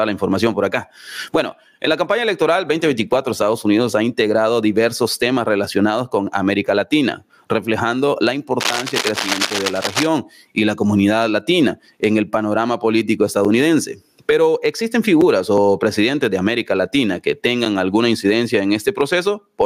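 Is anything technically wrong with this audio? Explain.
Yes. Two faults can be heard.

Gain pumping runs through the whole clip. The gain ducks under each loud sound. The level swings by around 20 dB. Loud and soft parts sit too close together, and everything feels squashed. The likely cause is input gain set far too high, with a fast limiter or compressor clamping down on every peak and releasing in the pauses.

Cable scratch noise appears from 8.60 to 10.07 s. Dense, uneven bursts of scratching and rustling sit over the sound. They are roughly as loud as the sound itself. The likely cause is a worn cable, connector or control being moved. Its contact resistance shifts rapidly, and those shifts reach the signal as crackle.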